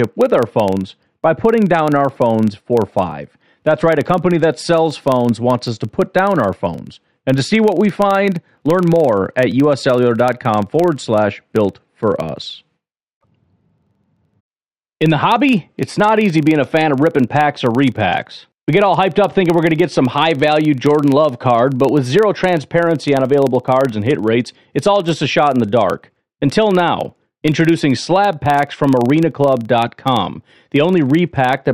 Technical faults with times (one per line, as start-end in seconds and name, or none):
0.00-31.73 filter restarted on every block